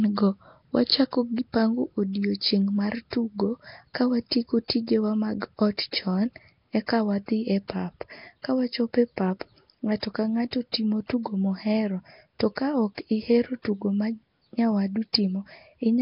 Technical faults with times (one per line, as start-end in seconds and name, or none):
0.00-16.01 Nellymoser compression
4.68 pre-echo
10.72 pre-echo